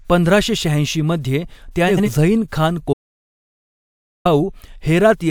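At 1.88 s the speech briefly garbles: there's a case of frames out of order running to about 2.09 s. Two neighbouring runs of roughly 85 ms each, which fits two codec frames apiece, got decoded in swapped order, so that short stretch plays with its halves exchanged. You hear a quick fluttery jumble, but nothing is actually missing.

Then at 2.93 s there's an audio dropout to silence lasting about 1.32 s, until 4.25 s. The speech cuts off mid-flow and the gap is dead digital silence with no room tone at all, before the sound snaps back in. That points to the input being lost, likely a disconnect or link failure, while the recorder kept writing silence, so whatever was said in that second-plus is simply gone.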